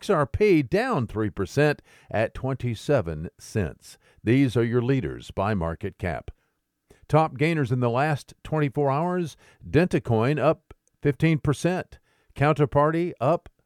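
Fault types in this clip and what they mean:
No faults can be heard anywhere in this recording.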